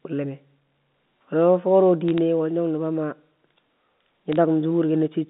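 From 2.08 to 2.18 s and again from 4.32 to 4.36 s, bit errors on a digital phone line put short bursts of crackling ticks over the speech. Each flipped bit spoils one 8-bit sample, and a sign or high-order hit makes the waveform jump.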